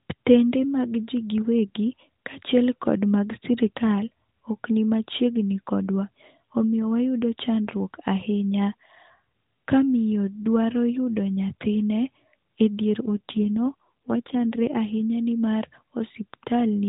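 It's a speech clip over an AMR narrowband mobile codec. From 13.02 to 14.76 s there's an AMR rate drop: the voice turns rougher and more synthetic with no gap or band change, fitting a fall from 12.2 to 5.9 kbps, before recovering at "ahinya nimar".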